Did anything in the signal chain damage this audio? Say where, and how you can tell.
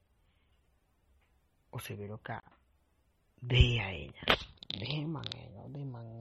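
Yes. Throughout, the speech sounds watery and swirly, with metallic chirps on s sounds, smeared onsets and nothing above 15.9 kHz. This is likely MP3 compression at the codec stage: starved of bits, which fits a bitrate near 32 kbps, the encoder cut the treble and let weak frequency lines flicker between frames.

At the buffer or driver stage, a block of digital silence runs from 2.40 to 2.43 s, a 32 ms hole with hard edges. The output buffer wasn't filled in time, so zeros were played in place of audio.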